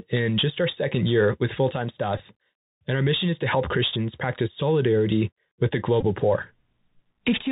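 It's a speech clip that's gone through a Bluetooth CVSD headset codec the whole way, and the damage is plainly audible. Everything above 4 kHz is gone, s sounds come out scratchy, loud bright bits distort as the adapting step can't keep up, and there's a granular hiss underneath, which all fits CVSD at 64 kbps. On top of that there are two Bluetooth headset packet repeats, at 2.18–2.20 s and 6.01–6.05 s. Each one sounds like a short buzz around 267 Hz, where the chip replayed the previous packet's bits to cover about 15 ms of lost audio. That gap fits four 3.75 ms packets dropped in a row.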